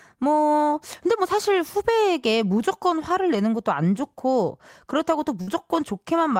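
Right near the end of this speech, from about 5.41 to 5.50 s, there's a burst of packet loss. A short run of audio never arrived in time, so the receiver papered over it by stretching the last bit of sound for roughly 57 ms and letting it fade, which you hear as a brief smeared, decaying patch. When the speech picks back up, about 60 ms of it has simply been skipped, so it jumps slightly forward.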